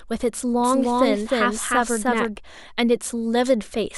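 From 0.60 s to 2.36 s the speech carries a doubled audio track: a full-band copy trailing by roughly a third of a second at about equal level, likely from a second capture path.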